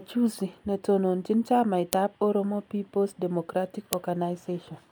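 At 1.93 s a sharp, loud click snaps through the speech. A second one follows at 3.93 s. This is a file header played as audio. The stream was joined from 2-second pieces, and each piece's header bytes were played as samples.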